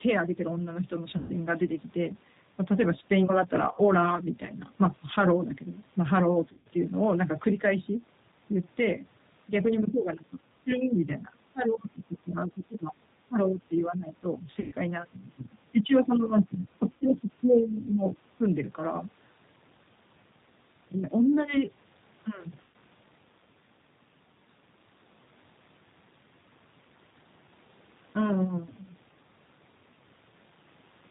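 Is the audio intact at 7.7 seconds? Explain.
No. At 7.7 s, as across the whole clip, the speech carries G.729 codec damage. Each 10 ms frame is rebuilt from a vocal tract filter, a pitch predictor and a few pulses, which fits an 8 kbit/s stream. Nothing above 4 kHz survives, and the speech sounds plainly rough, buzzy and synthetic.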